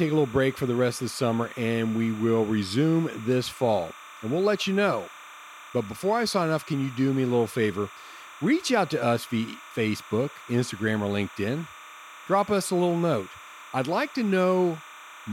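Timecode bleed runs throughout the speech: linear timecode at 30 frames per second has leaked in from a neighbouring track or cable. Its square wave switches between roughly 1 kHz and 2 kHz, producing a steady chirping warble about 20 dB below the speech.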